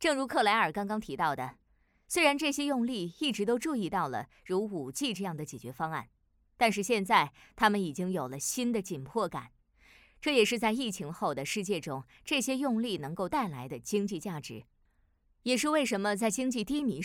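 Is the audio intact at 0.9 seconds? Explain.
Yes, the audio is intact at 0.9 seconds, with no fault present at that moment.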